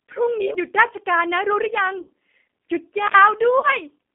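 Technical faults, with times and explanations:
Throughout, G.729 codec: the audio sounds narrow, slightly rough and synthetic, with nothing below about 200 Hz or above 3.6 kHz, and the codec damage is plainly audible. This 8 kbit/s VoIP codec does not keep the waveform. It rebuilds each 10 ms frame from a vocal tract filter, a pitch predictor and a few pulses, and that coarse rebuilding gives the buzzy, artificial texture heard here.
0.54 s, CD skip: a tick and a sudden jump in the sound, with the player going silent for just a few milliseconds before carrying on from a different point. The laser was knocked or misled by a flaw onto another turn of the disc's spiral. The music or speech therefore resumes at a place displaced by whole disc revolutions, which creates the abrupt discontinuity.
2.02–2.10 s and 3.59–3.77 s, VoIP packet loss concealed by the speech codec: the sound smears into a buzzy tone or coloured noise that fades, and it stays weak and distorted for a moment after normal sound resumes. 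About 60 ms of audio went missing in the first gap, which fits three 20 ms packets, and about 40 ms went missing in the second. The decoder filled each gap by repeating its last pitch and filter at falling gain. Because every frame builds on the previous one, recovery lags.
3.06–3.15 s, intermittent contact: the sound drops out for about 60 ms with crackle at either edge and faint hiss during the gap. A loose plug or cable briefly broke the connection. The signal vanished while the contact was open, and the crackles came from the contact scraping as it broke and remade.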